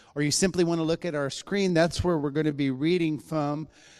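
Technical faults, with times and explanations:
1.00–4.00 s, time-stretched section: from here to the end the sound suddenly drags to about 0.74 times its pace with the pitch unchanged, likely because software padded it to a length by repeating short slices.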